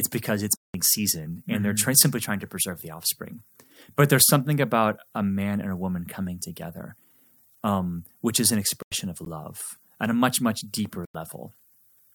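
At 0.56 to 0.74 s, after "because it's", a block of digital silence cuts the audio out for about 186 ms, which fits an 8192-sample buffer left unfilled. The sound returns before "season and." Shorter 93 ms blocks, which fit 4096 samples, follow at 8.82 to 8.92 s after "um which is an" and at 11.05 to 11.15 s after "a much much deeper." At 9.25 to 9.29 s, a corrupt frame decoded across a couple of frames puts misplaced energy into a brief glitch peaking at about -30 dBFS.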